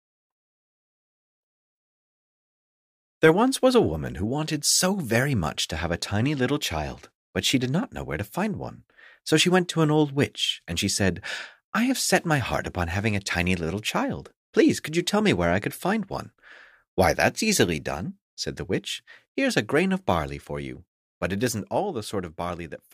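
Nothing stood out on listening to this clip.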